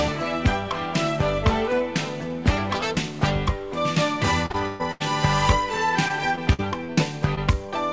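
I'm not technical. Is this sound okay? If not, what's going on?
No, there are real dropouts, all in the second half.

The main problem is repeated packet loss, which gives a robotic sound. Between 4.46 and 5.02 s, four chunks of audio went missing on the way, the longest about 0.12 s. Each time, the receiving end plugged the hole by stretching out the last bit of sound, so almost half of that stretch is filler rather than the real thing. You hear it as choppy audio with pieces gone. It happens again from 6.08 to 6.99 s with five shorter gaps, none longer than about 0.05 s. About a fifth of that stretch is patched, so it's milder but still broken up.

There's also one short concealed packet loss between 7.35 and 7.39 s. A tiny slice of audio arrived too late, and the system papered over it by continuing the sound just before it, then blending back in. It's brief enough to come across as a quick smear or wobble rather than a gap, but anything very short at that moment could simply be lost.

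The overall sound stops at 8 kHz, which is normal for this kind of call connection and isn't part of the problem.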